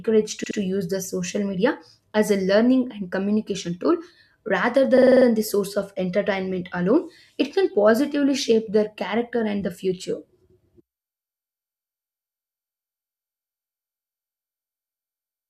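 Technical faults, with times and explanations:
0.43–0.58 s, repeated frames: a 72 ms block plays twice more just before "to use the social", a stutter adding 144 ms, consistent with three compressed frames resent.
4.97–5.26 s, repeated frames: between "and communication tool rather" and "the source of entertainment", a 48 ms block repeats six extra times, a rapid stutter adding 288 ms.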